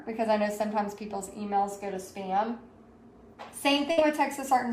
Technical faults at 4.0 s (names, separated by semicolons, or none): burst of packet loss